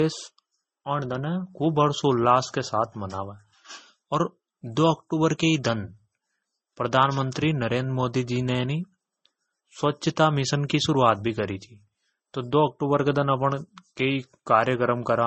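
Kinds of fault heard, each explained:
Transcoding between lossy codecs: Nothing in this speech is heard above 8.3 kHz, and two different kinds of coding damage sit on top of each other throughout. The artefacts of the two codecs are heard together. This likely comes from an MP3 encode at a low bitrate, near 35 kbit/s, re-encoded as Vorbis at a similar rate. A single low-bitrate encode would show only one codec's style of damage, not both blended together.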